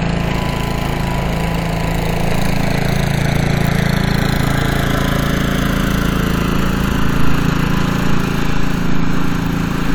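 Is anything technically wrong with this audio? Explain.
No, nothing in this recording of sounds points to a technical problem with the signal.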